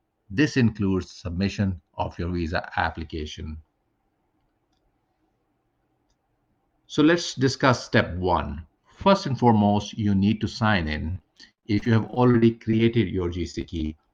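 Repeated packet loss from 11.11 to 12.79 s and again from 13.51 to 13.91 s leaves holes, up to 65 ms long, patched by stretching the preceding sound, covering about a fifth of each span. The audio turns choppy and robotic, with fragments missing.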